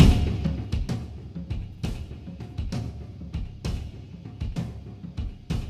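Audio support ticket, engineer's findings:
Ticking/zipping riding on the sound, 0.28–0.93 s, during a level drop of about 15 dB. Zipper noise: gain stage applying unsmoothed 2 dB steps, about 10 per second, each step a small click.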